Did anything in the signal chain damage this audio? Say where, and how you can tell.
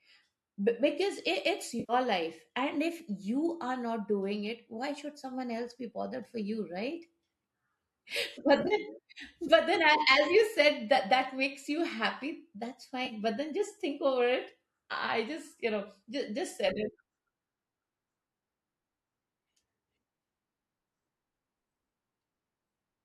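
Yes. The codec and network stage shows AAC frame loss with concealment. At 1.80 to 1.93 s, about 90 ms turns smeared and noisy. At 8.60 to 8.74 s, 70 ms of gaps scatter over 100 ms, the longest around 30 ms. At 13.05 to 13.13 s, 40 ms blurs. The decoder is filling the lost frames from the last good spectrum.

The driver or buffer stage causes two jumps, at 3.00 s and 8.12 s. At each, the sound jumps ahead with no silence. Roughly 10 ms goes missing each time. This is likely a dropped buffer from an overrun. The samples were overwritten before capture, and the two sides were joined directly.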